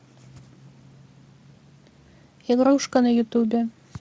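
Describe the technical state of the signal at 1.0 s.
At 1.0 s the speech is intact, with the Speex coding carrying it cleanly and no audible fault at that moment.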